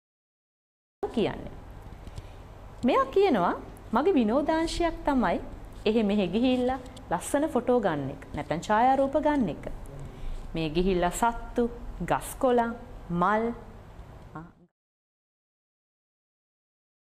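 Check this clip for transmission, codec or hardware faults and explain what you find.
One fault stands out, a cut-off start at the opening of the clip. The capture or stream came in late, so the first 1.03 s is digital silence and the audio then appears at 1.03 s partway through a sound, with no natural attack or fade-in and an abrupt, hard-edged entry. The smooth fade-out toward the end, running from about 14 s to 14.72 s, is an ordinary editing fade.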